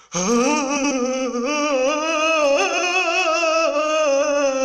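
Frames out of order: adjacent runs of frames were decoded in swapped order, so from 0.76 to 0.92 s, and again from 2.73 to 2.84 s, the sound plays with its two halves exchanged. Each reads as a brief garbled flutter, with no time lost.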